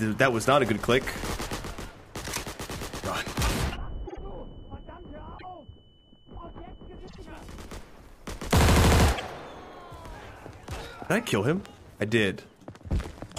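Repeated frames stutter the sound at 4.06, 5.37, 7.07 and 9.16 seconds. A short block, about 52 ms or 26 ms, replays once or twice.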